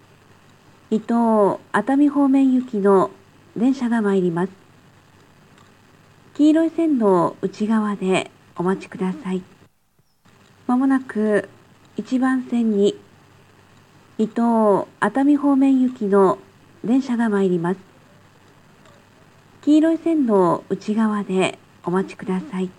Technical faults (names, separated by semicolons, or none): none